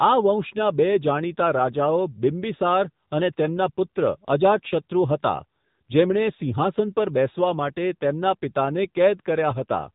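From start to finish the speech carries the sound of the AMR narrowband mobile codec, with plainly audible damage. The voice is boxy and buzzy, synthetic, as the codec rebuilds it from a vocal-tract model and a few excitation pulses in each 5 ms. That fits one of the middle AMR-NB modes, around 7.95 kbps. A spectrogram shows a hard ceiling at 4 kHz with nothing above, and smeared, simplified harmonics beneath it.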